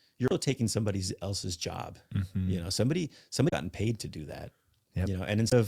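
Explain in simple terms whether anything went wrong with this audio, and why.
Three short patches of the compressed audio stream were damaged. At each one, the decoder hit garbled data, lost its place, and had to hunt for the next clean chunk before it could continue. This damaged data in a compressed stream comes through as a brief chirp or blip: at 0.28 to 0.32 seconds, just before "taking somebody else's job"; at 3.49 to 3.53 seconds, between "know somebody" and "paid to"; and at 5.49 to 5.52 seconds.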